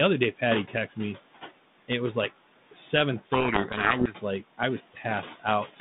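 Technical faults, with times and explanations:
Throughout, noise suppressor artifacts: the background noise ducks down in the gaps between phrases and swells back up under the speech. The suppressor works frame by frame, estimating which frequency bands hold only steady noise and pulling them down by about 16 dB. The room noise sits only about 16 dB below the speech.
3.16 to 4.14 s, codec payload misread: for about a second the speech is buried under harsh, grinding distortion, clearing just before "like I was". The sound points to the two ends disagreeing on the bit order inside the G.726 code words. The decoder still receives frames that look valid, but it reads each sample's difference value with its bits in the wrong positions, so the adaptive predictor reconstructs a badly wrong waveform. The 32 kbit/s G.726 link is otherwise coding with only light damage.
4.79 to 5.05 s, speech cut by the noise suppressor: right after "like I was", part of the following sound is swallowed and goes faint for about a tenth of a second, dipping by about 8 dB at its deepest point. 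The suppressor mistook this soft, low-level stretch of speech for background noise and turned it down along with the background. That is why the sound seems clipped short or muffled, rather than simply spoken quietly.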